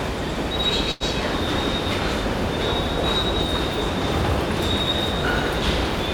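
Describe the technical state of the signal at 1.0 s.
At 1.0 s the signal is in a short stall from a late packet, running from 0.91 to 1.03 s. A packet arrived late and the jitter buffer ran dry. The receiver stretched the last sound for about 89 ms, then resumed from the same point. Nothing is lost. Everything after lands 89 ms later. The held sound carries a slight buzz or dip.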